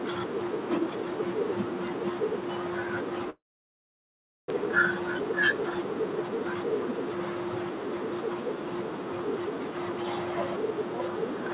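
From 3.3 to 4.52 s the sound stops: a brief fading buzz continues the last sound, then about 1.1 s of near silence before audio resumes with roughly a second missing. This is likely a long network dropout. On a spectrogram, a short smear fades into a blank gap.

From 4.60 to 6.93 s a jitter buffer speed-up trims short pitch-period pieces, roughly 150 ms in total, to cut the added delay. The sound runs about 7% fast and slightly hurried at unchanged pitch. The waveform looks compressed while the harmonic bands stay level.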